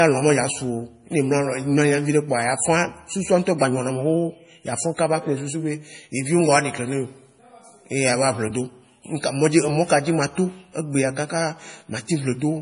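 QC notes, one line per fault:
Throughout, MP3 compression, likely a low bitrate around 32 kbps. Nothing above 10.5 kHz, and heavy watery swirl on the speech as starved frequency lines flicker in and out.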